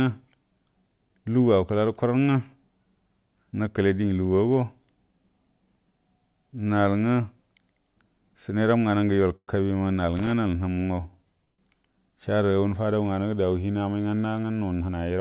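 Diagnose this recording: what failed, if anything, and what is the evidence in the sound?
In the network and jitter-buffer stage, two call audio freezes appear, likely from packets held up in transit that left the buffer empty. After "səneram nganə ngə yol", the sound at 9.36 to 9.50 s smears into a fading buzz or hiss with about 60 ms of silence, and 11.45 to 11.75 s stalls similarly. Speech resumes where it stopped, so nothing is lost, only delayed.

In the analogue wiring, a loose connector crackle points to a worn or dirty contact making and breaking as it moved. From 10.17 to 10.32 s the signal is chopped into an irregular burst of scratchy crackle.

In the call processing, a jitter buffer speed-up occurs after "amai nganə". From 14.36 to 15.19 s the receiver trimmed a backlog by cutting out short pitch-period slices, about a tenth of a second in total. Speech runs at 110% speed with unchanged pitch and sounds hurried.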